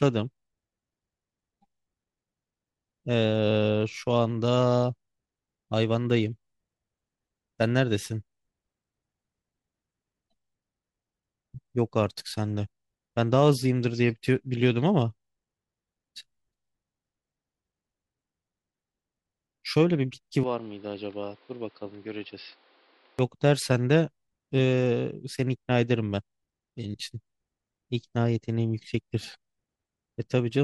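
From 20.43 s to 23.19 s, the speech suddenly turns duller and boxier. Nothing is heard above 5.4 kHz. The level drops by a few decibels, and a faint new background noise appears, roughly 30 dB below the speech. There is no gap at the change. At 23.19 s the full, brighter sound returns. This is likely an input switched to a poorer device, with a narrower band and its own noise floor.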